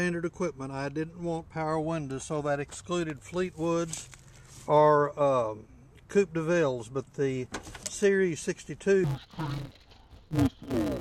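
From 9.04 s to the end at 11.00 s, the sound turns dull and robotic, with a steady buzz at about 188 Hz and no clear drop in pitch. This is interleaved audio read as planar. The stream arrives in short blocks of alternating left and right samples, but each block is split in half, the first half treated as left and the second as right. With blocks of about 5.33 ms, which fits a 256-sample buffer, the scrambling repeats 188 times a second and is heard as that buzz.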